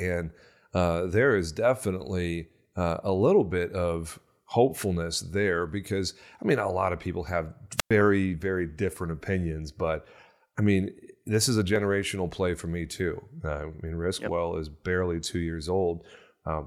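Around 7.77 s, right after "lot of people have", there's a wireless microphone squelch dropout: the radio link fades, the receiver mutes for about 106 ms, then speech returns on "very different opinions but".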